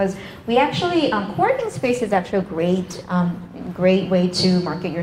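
From 1.6 s to about 3.55 s there is a call bitrate drop. The encoder was forced onto far fewer bits, which fits a fall from around 128 kbps to roughly 22 kbps. The top end dulls, and the sound turns rough and watery for nearly 1.9 s before recovering.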